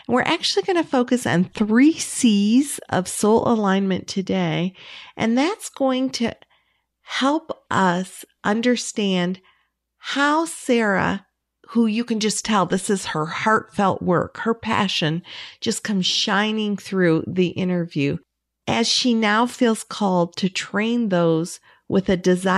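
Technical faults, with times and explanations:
Nothing technical stands out in this speech recording; there are no faults to list.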